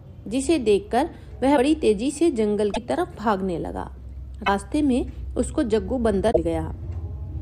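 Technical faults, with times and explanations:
1.56–1.59 s, 2.73–2.78 s, 4.46–4.49 s and 6.31–6.37 s, broken MP3 bit reservoir: each time the sound jumps ahead and the next 30 to 60 ms decode as a garbled glitch, roughly one or two frames at the 26.1 ms size that fits MP3. The likely cause is missing frames: the following frame reaches back for reservoir data and reads another frame's bytes. Unlike a plain dropout or a repeated buffer, the sound leaps forward with a chirp, a noise burst or a short hole.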